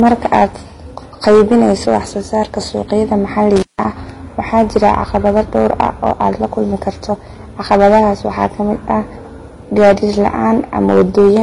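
Hard clipping runs through the whole speech clip. The signal is driven about 9 dB past what the chain can pass, so every loud syllable has its peaks sliced flat. Only a few percent of samples go over, but the flat tops add harmonics well above the speech itself, and these come through as a harsh, gritty fuzz on the stressed parts of each phrase rather than as occasional crackle. Also throughout, the audio has a dull, smeared top end with nothing above 11.4 kHz. Metallic swirl and warbling, blurred consonants sit on top of each other, as if two different sets of compression artefacts were mixed together. The likely cause is transcoding between lossy codecs: an early Vorbis encode at a low rate, which fits something around 34 kbit/s, then re-encoded as HE-AAC at a similar rate near 32 kbit/s. The second encoder wastes bits reproducing the first one's damage and adds its own, and the lower bandwidth limit survives. 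An intermittent contact fault occurs from 3.56 s to 3.85 s. The line drops open for about 0.16 s, so the speech drops out, leaving only faint hiss, with a sharp crackle as the connection breaks and again as it remakes, the mark of a loose plug or cable.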